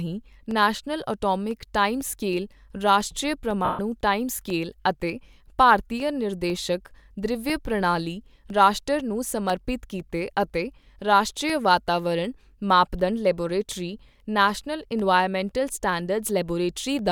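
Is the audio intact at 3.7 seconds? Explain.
No. From 3.65 to 3.79 s, 140 ms of speech is affected by lost LE Audio frames, which fits fourteen 10 ms frames. The decoder reuses the last spectrum with random signs and fades it, turning the sound into a noisy smear. On a spectrogram, harmonics blur into a fading wash.

Periodic USB or driver dropouts also run from 0.51 to 16.99 s. Every 0.5 s, about a millisecond of audio is replaced by silence as the driver stalls, giving a regular tick. The waveform shows brief silent gaps, and the spectrogram shows thin vertical lines.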